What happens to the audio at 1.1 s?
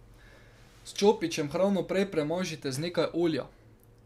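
Nothing goes wrong at 1.1 s; the speech runs through that moment intact, with no dropout, click or distortion.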